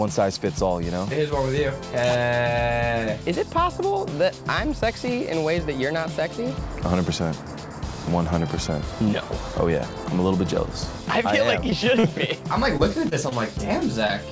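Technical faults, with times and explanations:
11.70, 11.99–12.05, 12.77, 13.09, 13.29, 14.07 s, short concealed packet loss: gaps of about 20 ms (40 ms at 11.99) were filled by extending the preceding sound, leaving brief smears or wobbles.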